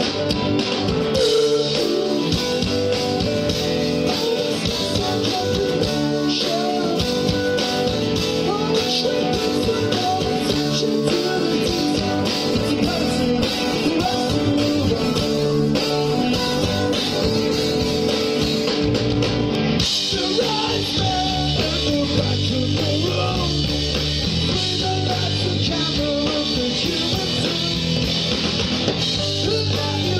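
From 12.52 s to 18.03 s the sound turns rough and watery, loses its top end and goes muffled, staying degraded for about 5.4 s before clearing. This is a call bitrate drop: the connection's bandwidth estimate fell, forcing the encoder to code far more coarsely and discard high frequencies. The change in quality fits a fall from a full-rate stream near 128 kbps to roughly 15 kbps, with recovery at the end.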